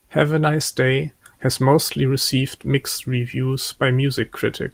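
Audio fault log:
No technical faults can be heard in this speech recording. Nothing in the audio calls for a log entry.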